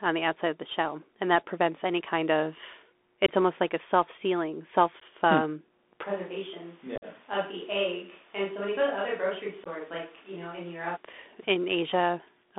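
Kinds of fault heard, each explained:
Bluetooth CVSD headset codec: The whole clip sounds squeezed through a headset link, with nothing below about 250 Hz or above about 3.6 kHz. CVSD codes each sample as a single up-or-down bit at 64 kHz with an adapting step, and you can hear it struggle here. Loud, bright moments outrun the step and smear, s sounds come out scratchy, and a grainy hiss sits under the speech throughout.
unconcealed Bluetooth headset packet loss: Short bursts of headset audio never arrived and were replaced by silence, leaving abrupt little holes that can click at their edges. There's one right after "prevents any kind of" at 3.26 to 3.29 s, another after "a self sealing hmm" at 5.00 to 5.02 s, and a single one at 9.64 to 9.68 s. The roughest spot is 6.96 to 7.05 s, where about 53 ms goes missing in scattered pieces, so the sound chops and crackles there.
switch to a distant microphone: From 6.06 s to 10.95 s the sound suddenly goes roomy and hollow, loses body, and drops by about 10 dB. 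Background noise comes up to roughly 30 dB below the speech. The most likely cause is that the close headset mic's signal dropped out and a microphone farther away took over for that stretch. The change is abrupt both going in and coming back.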